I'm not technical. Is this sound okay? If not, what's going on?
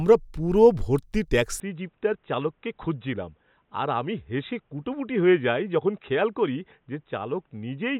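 No. From 1.6 s to the end, the speech turns dull and slightly quieter, with nothing above 3.8 kHz and a faint new background hiss. This is likely an input switched to a poorer device. Tone, loudness and noise all change at once, which a simple muffling wouldn't do.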